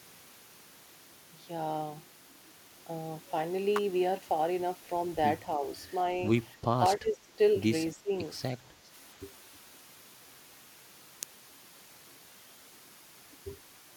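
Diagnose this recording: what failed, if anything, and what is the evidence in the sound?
Electrical switching spikes, picked up in the analogue wiring: sharp snaps at 3.76 to 3.78 s, 6.86 s and 11.23 s, most likely from a nearby switch or discharge arcing into the line. Each appears as a near-vertical full-band stripe on the spectrogram and a narrow spike standing above the waveform.

Speech suppressed in double talk, a call-processing fault: the speech dips by roughly 15 dB from 7.0 to 7.38 s and again from 7.95 to 8.13 s. The likely cause is an echo canceller that could not separate the talker from loudspeaker echo while both sides spoke, and turned both down. The waveform envelope sags in those windows, and the spectrogram thins.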